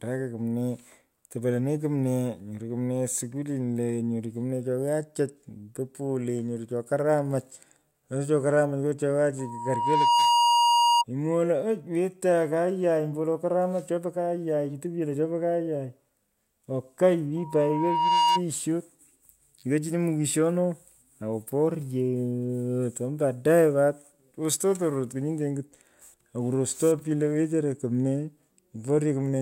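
Loudspeaker feedback squeal at 9.39 to 11.04 s and 17.36 to 18.42 s: the microphone re-amplifies its own loudspeaker, so a 950 Hz tone swells within about a second to slightly above the speech.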